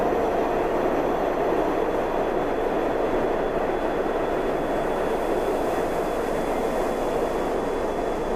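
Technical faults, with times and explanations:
No technical faults can be heard in this music.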